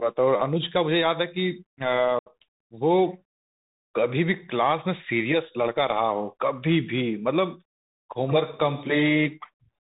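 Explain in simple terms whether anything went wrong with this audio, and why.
Throughout the speech, the sound is muffled and boxy, with a grainy hiss underneath and scratchy s sounds. That is the Bluetooth CVSD headset codec, the basic phone-call link for headsets. It cuts everything above 4 kHz and can't follow sharp, bright sounds cleanly.

At 2.19 to 2.30 s the speech drops out for about 70 ms, with abrupt edges, then returns briefly quieter. This is unconcealed Bluetooth headset packet loss: around twenty tiny voice packets never arrived, and nothing patched the hole.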